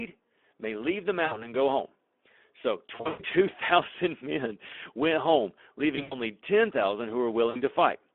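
Right from the start the whole clip carries Speex codec damage. The speech sits in a narrow telephone band, roughly 250 Hz to 3.5 kHz, so it sounds thin with no air on top. Within that band it's plainly hoarse and grainy, because the codec is starving the excitation signal of bits. The amount of grit fits a low-quality setting of around 11 kbps.

Then there are four spots of VoIP packet loss concealed by the speech codec. In each one, audio went missing and the decoder filled the gap by repeating its last pitch and filter settings at falling gain. You hear that as a short buzzy or smeared stretch that fades. The first is at 1.25 to 1.52 s, covering about 60 ms of lost audio. The worst is at 2.95 to 3.22 s, with 200 ms missing in patches and the longest run at 120 ms. After that comes 5.95 to 6.18 s, with 120 ms lost and a 100 ms run, and the last is at 7.49 to 7.61 s, with 60 ms lost. Each time, the sound stays weak and distorted for a moment after it returns.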